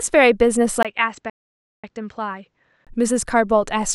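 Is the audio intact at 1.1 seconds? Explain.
No. From 0.83 to 2.87 s the speech turns dull, boxy and a little quieter, with a narrower band, after a brief gap at the switch: the input likely switched to a poorer device.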